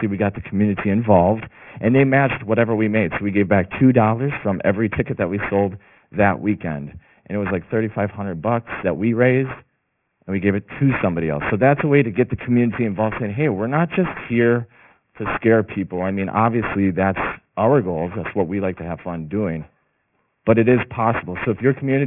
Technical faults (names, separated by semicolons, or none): aliasing